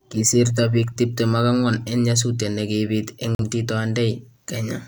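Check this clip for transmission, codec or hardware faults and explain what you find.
There's one fault here, a digital broadcast dropout at 3.35 s: the receiver muted for roughly 86 ms after a bad frame, leaving a brief silent hole in the speech.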